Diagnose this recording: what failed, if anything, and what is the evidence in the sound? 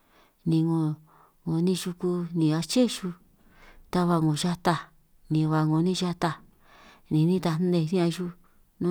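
Crude rate conversion during sample-format conversion, 4.26 to 6.52 s. A faint inharmonic fizz, roughly 40 dB down, trails the speech. Unfiltered linear interpolation aliases.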